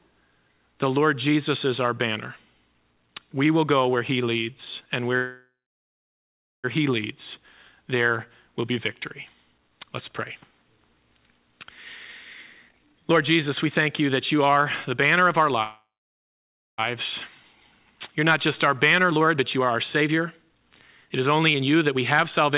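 At 5.16 s a call audio freeze begins and lasts until 6.66 s. The last sound stretches into a fading buzz, then about 1.1 s of silence. Playback resumes where it stopped, so nothing is lost. The likely cause is delayed packets draining the jitter buffer.

From 12.69 to 15.52 s comes a jitter buffer speed-up. Short pitch-period pieces are cut repeatedly, dropping roughly 0.7 s. The audio runs at 123% speed with unchanged pitch and sounds hurried.

A second call audio freeze runs from 15.63 to 16.80 s. Again a fading buzz leads into about 0.9 s of silence before the sound continues intact.

A second speed-up follows from 17.51 to 22.51 s, at 120%, removing about a second in total. Throughout, the call path's band limit leaves nothing above 4 kHz, which fits G.711 A-law.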